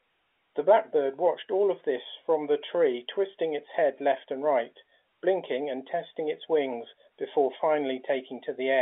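Nothing goes wrong anywhere in this bit of speech; it simply has the narrow sound of an ordinary phone line, consistent with G.711 A-law coding and a band running from roughly 300 Hz to 3.5 kHz.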